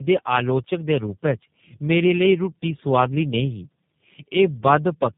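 Throughout, tandem speech coding, with three low-rate coders each re-encoding the last one's output, makes speech rough, muffled and warbly. A spectrogram shows nothing above 3.7 kHz.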